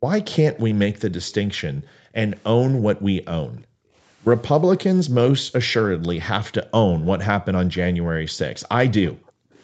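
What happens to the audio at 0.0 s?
Right at the start, from 0.0 to 0.07 s, the background is gated by the echo canceller. It judged the loudspeaker to be active and pulled the microphone down hard, by about 28 dB at the deepest point, so the room sound dips almost to silence for a brief moment before the canceller lets go. Unlike a packet-loss dropout, it leaves no click, glitch or repeated fragment. The level simply sinks and recovers.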